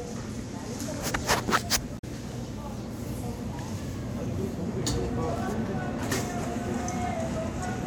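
From 1.95 to 2.04 s there is damaged data in the compressed stream. Corrupted bytes make the decoder misread frames and lose sync. A short glitch results.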